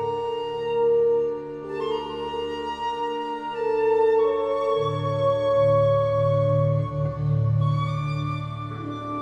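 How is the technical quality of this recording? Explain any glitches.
No glitches can be heard in this recording. Nothing in the audio points to a technical problem.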